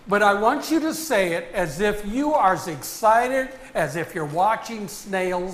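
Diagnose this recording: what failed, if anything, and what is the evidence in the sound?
Nothing failed; no fault is audible anywhere.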